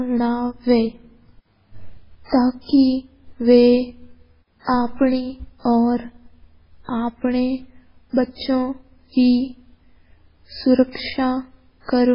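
Throughout the speech, nothing is audible above about 5.3 kHz, and the remaining band swirls and warbles as weak spectral lines drop in and out between frames, with smeared consonant onsets and metallic s sounds. This is heavy damage, likely from MP3 compression at a very low bitrate, around 16 kbps.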